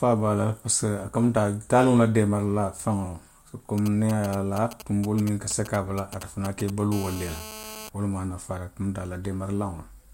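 From 3.78 to 6.70 s, GSM signalling bursts break in: a nearby 2G handset sends short clusters of radio pulses that the audio circuit rectifies, producing a galloping dit-dit-dit of brief 217 Hz buzzes roughly 15 dB below the speech. A spectrogram shows intermittent vertical stacks of harmonics on a 217 Hz spacing.

From 6.92 to 7.89 s comes GSM phone buzz, as the handset transmits continuously in call mode, pulsing 217 times a second. The result is a steady, raspy buzz about 14 dB below the speech, seen as unbroken horizontal harmonic lines at 217 Hz intervals and a regular pulse train in the waveform.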